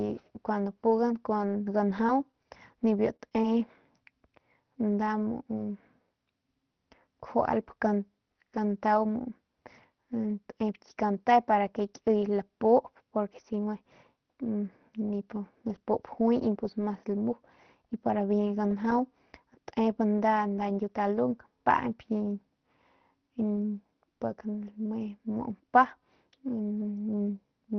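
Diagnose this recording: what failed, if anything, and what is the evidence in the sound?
The network dropped packets here, which shows up as scattered short gaps between 1.89 and 3.44 s. You hear around half a dozen small ticks and smears where a few packets went missing or arrived late, none longer than a few tens of milliseconds. The receiver's concealment covered each hole by extending the last bit of sound. That patching accounts for a small slice of the span, so the speech stays clear, just hiccupy, over a call path whose top end stops near 6 kHz.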